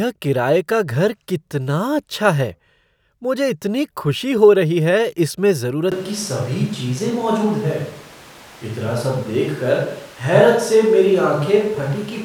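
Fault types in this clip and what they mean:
Switch to a distant microphone: At 5.92 s the speech suddenly turns roomy and hollow, with thinner bass. The loudness stays roughly the same. Room noise rises to around 25 dB below the speech. The change is abrupt, and the sound stays this way to the end. The likely cause is that the close microphone dropped out and one further away took over. That far pickup hears the room's reflections and background noise along with the talker.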